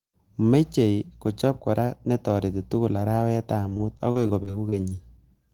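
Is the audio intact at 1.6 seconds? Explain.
Yes, the speech at 1.6 seconds plays through intact, with no dropout, click, distortion or other fault at that moment.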